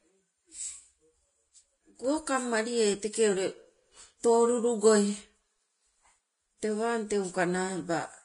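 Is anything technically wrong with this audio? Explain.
Yes. Throughout, the speech has nothing above 10.6 kHz and grainy, hissy treble, likely from low-bitrate Vorbis compression. Coarse quantisation turns detail into noise, unlike a plain low-pass filter's clean dullness.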